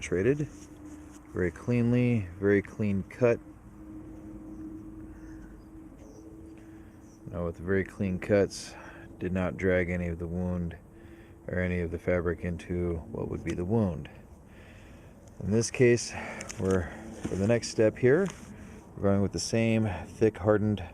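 No technical faults can be heard anywhere in this clip.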